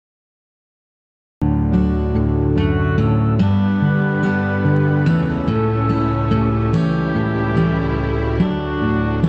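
The recording began late, a cut-off start. Digital silence runs from 0 to 1.42 s, and at 1.42 s the sound enters abruptly mid-event with no attack or fade. The call codec's band limit, which sounds like Opus at about 8 kHz, also dulls the top end.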